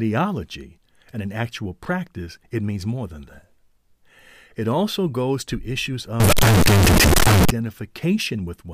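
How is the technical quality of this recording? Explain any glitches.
The recording carries one serious glitch, a burst of harsh distortion from 6.20 to 7.50 s. Over that stretch the speech turns into a loud, buzzing, nearly square-wave blare that sits at an almost fixed, high level regardless of how softly it was spoken, and the background noise jumps up to match the speech level. The pitch contour can still be followed through it. This is the sound of float read as integer: the likely cause is 32-bit floating-point samples being interpreted as 32-bit integers, so each sample's sign and exponent bits, not its actual amplitude, decide the output value.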